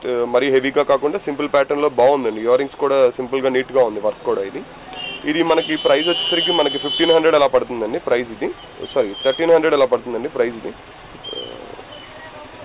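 Listening closely, nothing in the sound stood out as a fault, with the call path heard only as the expected narrow band that stops around 4 kHz.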